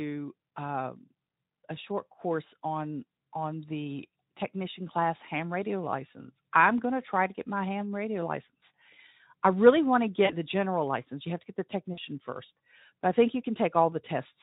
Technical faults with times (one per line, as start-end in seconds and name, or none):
10.25-10.32 VoIP packet loss concealed by the speech codec
11.93-11.99 VoIP packet loss concealed by the speech codec